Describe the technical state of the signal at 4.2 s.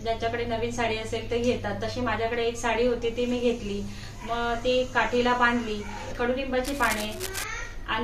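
At 4.2 s the signal is intact, with no dropout, clipping, glitch or other technical fault to be heard there.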